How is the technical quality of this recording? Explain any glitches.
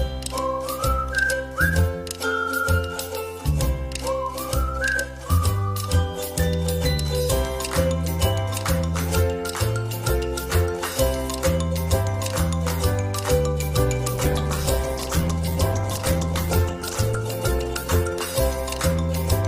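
Quality is clean until a call bitrate drop at 14.17 s runs to the end, turning the sound coarse, watery and muffled as high frequencies vanish. The encoder lost bits after the bandwidth estimate fell, consistent with a slide from 64 to 11 kbps, bottoming out for about 2.7 s.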